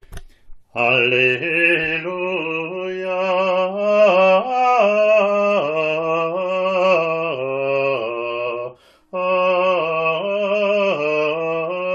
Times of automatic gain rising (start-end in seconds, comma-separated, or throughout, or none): none